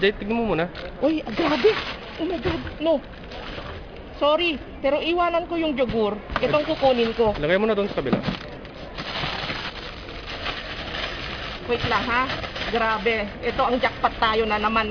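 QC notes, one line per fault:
throughout, aliasing: energy above 5.5 kHz folds back as gritty, metallic tones unrelated to the source, roughly 20 dB below the signal, pointing to a 48 kHz to 11 kHz conversion without anti-alias filtering. Unlike plain band-limiting, false tones appear rather than highs simply dulling.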